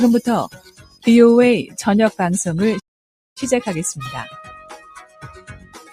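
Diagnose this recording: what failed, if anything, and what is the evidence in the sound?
Call processing: a speech-oriented noise suppressor applied to music or sounds stays engaged throughout. It treats sustained content and decay as noise, so the level swings by roughly 10 dB. On a waveform the envelope breathes, with onsets intact and held portions shrinking.

The same stage produces sound cut by the noise suppressor from 0.48 to 1.07 s, about half a second in all, dipping about 19 dB at its deepest, and again from 4.47 s to the end, about 10 dB down. A spectrogram shows energy thinning and tails truncated there while transients persist.

Playback: a playback stall from 2.79 to 3.37 s silences the output for 0.56 s mid-flow before the sound continues. The waveform shows a flat, silent gap and the spectrogram a blank vertical band, likely from the player running out of buffered data or a blocked thread.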